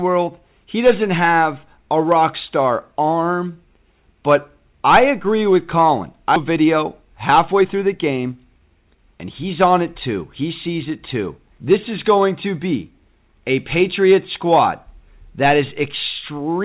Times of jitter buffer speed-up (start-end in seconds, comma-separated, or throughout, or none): 6.50-9.72